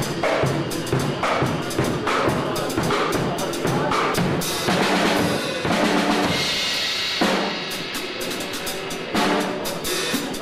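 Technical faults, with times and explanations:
1.61 s and 2.89 s, compressed frames skipped: the sound jumps ahead by roughly 150 ms, which fits several whole 26.1 ms frames going missing. Overlapping frames smear each join into a soft blip. The spectrogram shows a discontinuity without a sharp vertical click line.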